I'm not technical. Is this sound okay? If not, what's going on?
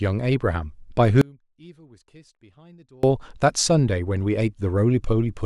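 No. Between 1.21 and 3.03 seconds the speech drops out for about 1.8 seconds. This is an audio dropout to a faint residue, most likely a brief loss of the main signal somewhere along the recording chain while the equipment stayed switched on and kept recording. The speech vanishes abruptly rather than trailing off, and what fills the gap is only a very faint trace of sound, far quieter than normal, before the speech cuts straight back in.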